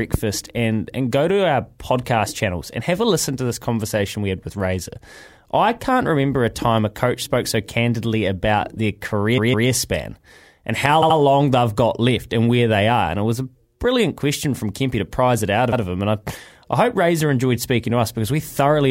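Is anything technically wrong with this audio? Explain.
Yes, there are repeated frames in this speech. A short block of compressed frames gets played again, so the same slice of speech stutters: around 9.37 to 9.68 s a 157 ms chunk plays twice more, around 11.01 to 11.17 s a 78 ms chunk repeats twice, and around 15.72 to 15.82 s a 105 ms chunk repeats once.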